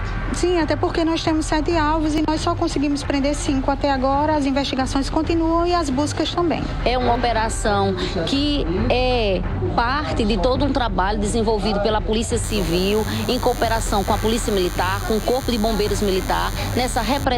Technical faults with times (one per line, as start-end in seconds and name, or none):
2.18 audio missing between chunks
7.15 audio missing between chunks
12.13 audio missing between chunks
12.43-17.24 DECT cordless phone buzz